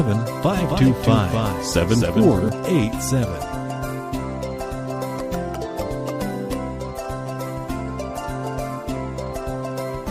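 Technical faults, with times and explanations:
0.51–2.49 s doubled audio track: a copy about 5 dB down trails roughly 300 ms, abrupt with no echo decay, likely a slower second capture path.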